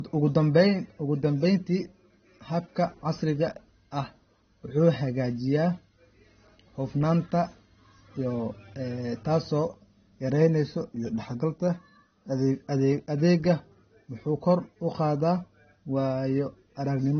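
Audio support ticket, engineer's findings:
Low-bitrate audio saved at a high bitrate, throughout the speech. Nothing above 6.3 kHz; dull, band-limited sound despite the MP3 container. Likely an earlier low-bitrate pass, fitting AAC around 24 kbit/s, re-encoded at high bitrate. The second encode cannot restore the removed content.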